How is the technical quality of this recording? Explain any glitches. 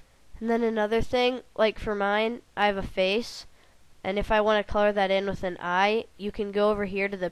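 Nothing stood out on listening; there are no glitches to explain in this recording.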